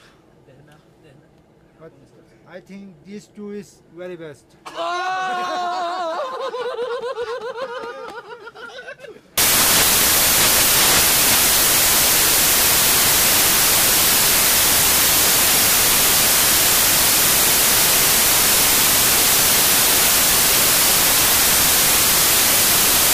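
From 9.38 s to the end, the sound becomes loud, harsh broadband noise: samples built from the wrong bytes, their low-order bits misread as the dominant part of each value.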